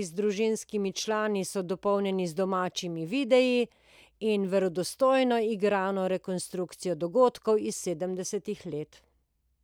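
Just a stretch of speech, and nothing technically wrong turns up anywhere in it.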